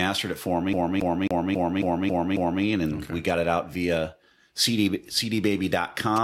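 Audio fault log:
0.73–2.64 s, CD stuck on one turn: right after "it for", the same 0.27 s scrap of speech comes round seven times, each repeat clipped off by a tiny mute at the jump. That's the classic skipping-disc stutter. A scratch knocks the laser back one track at the same point on every rotation, so it keeps replaying the identical slice, fast and evenly spaced, until it finally tracks past.
6.16–6.24 s, GSM signalling bursts: in the last moments of the clip there's a quick buzzy tick pattern, roughly 10 dB down from the speech, pulsing at about 217 Hz. That's a nearby 2G phone doing its signalling chatter, the short radio bursts sent before a call or text lands. The audio circuitry rectifies that RF, so you hear the familiar galloping dit-dit buzz rather than anything from the mic.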